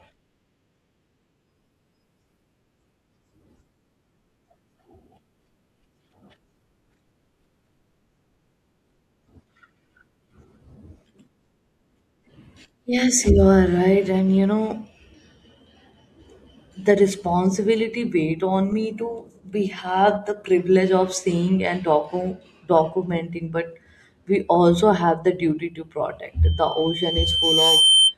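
Near the end, from 26.45 s to 28.15 s, a single piercing tone at 3.1 kHz rises out of the speech, swelling over roughly a second and a half until it sits a few decibels above the talker and runs to the end. This is loudspeaker feedback squeal: the microphone was picking up the loudspeaker it was driving, and at 3.1 kHz the loop's gain passed one, so that frequency kept reinforcing itself on each trip around.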